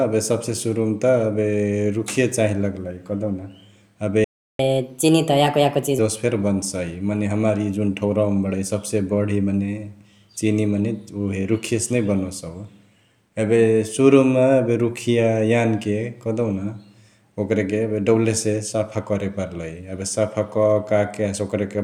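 At 4.24 s the speech cuts out mid-flow into silence for about 0.35 s, resuming at 4.59 s. This playback stall likely came from the player running short of buffered data or having its audio thread blocked, leaving the output with nothing to send.

From 4.59 s to 5.99 s the speech runs noticeably fast and high, at 1.25 times normal speed and raised by about four semitones, before settling back. This is catch-up at higher speed: the player resamples its backlog to recover the time lost in the stall.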